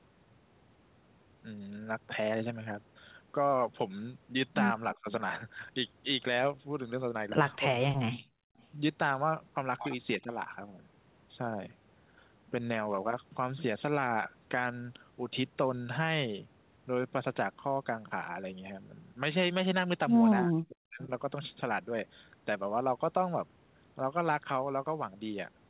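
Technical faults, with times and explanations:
4.94–5.08 s, 7.70–8.57 s, 10.18–10.30 s and 20.46–21.01 s, speech suppressed in double talk: the speech level dips in each window, by about 25 dB, about 40 dB, about 10 dB and about 40 dB respectively, with the two longer spans nearly gated out. The likely cause is an echo canceller reacting to simultaneous far-end audio, mistaking the near-end talker for loudspeaker echo and attenuating everything until the overlap ends.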